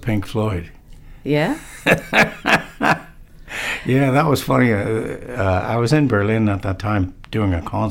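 Speech; from 4.72 s, just after "was funny", to the end at 7.91 s, the top end dulls from channel delay (comb filtering). One channel trails the other by about one sample, a few hundredths of a millisecond, so the mono sum cancels near 20 kHz.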